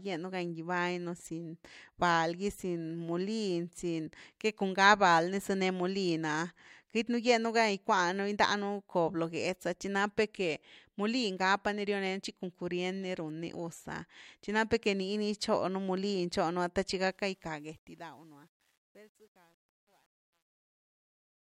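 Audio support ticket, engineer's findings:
Truncation distortion on the fade-out, 17.07 to 21.41 s, worst from 17.83 s to the end. The fade itself starts around 17 s. Its tail is what breaks down, turning gritty. Likely component is an undithered gain stage whose coarseness fits a 10-bit word length. Unlike a noise gate, the grit tracks the falling level rather than switching on and off.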